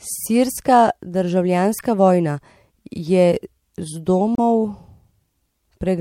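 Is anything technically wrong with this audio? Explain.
Yes. The speech has two brief instances of damaged data in a compressed stream, at 1.77 to 1.81 s and again at 4.35 to 4.39 s, each about 40 ms long. In both spots the encoded bytes are corrupted, so the decoder misreads the affected frames, loses sync and hunts for the next valid frame header before normal decoding resumes. Each event comes through as a short chirp, squawk, click or brief hole breaking into the speech.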